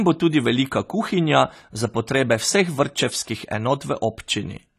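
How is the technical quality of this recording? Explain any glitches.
The recording carries plainly audible coding damage from start to finish. AAC compression, present throughout, is the likely cause: the encoder splits the sound into frames of frequency lines and spends its limited bits only where a hearing model says they matter. Here nothing survives above 14 kHz, and the thinly coded bands leave the speech dull and smeared, with a warbling, fizzy edge on sibilants and held sounds, which fits AAC-LC at around 32 kbps.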